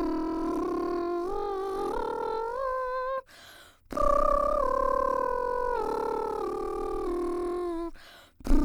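Music, with no technical fault heard anywhere in the clip. Nothing breaks into the sound at any point, and it runs on without interruption to its end.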